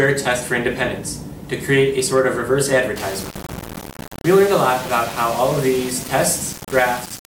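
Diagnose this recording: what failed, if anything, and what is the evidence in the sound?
From 2.96 s to the end the sound turns grainy, with a gritty distortion that tracks the signal and only about 15 dB below it. That's low bit depth without dither, likely a sample-format conversion rounding down to roughly 4 bits, so the error follows the waveform.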